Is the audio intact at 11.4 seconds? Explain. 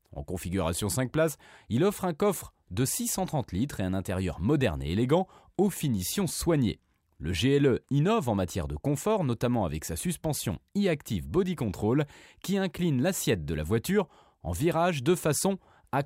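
Yes, the speech at 11.4 seconds plays through intact, with no audible fault at that moment.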